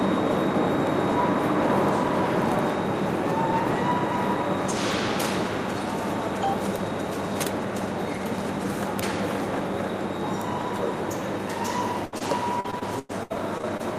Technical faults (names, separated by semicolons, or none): repeated packet loss (robotic sound)